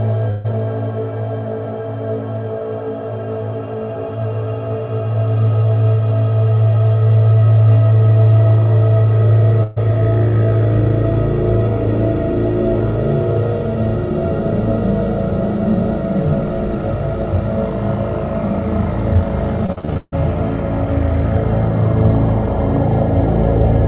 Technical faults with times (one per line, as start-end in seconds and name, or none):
0.30-0.46 burst of packet loss
9.63-9.78 burst of packet loss
19.66-20.14 repeated packet loss (robotic sound)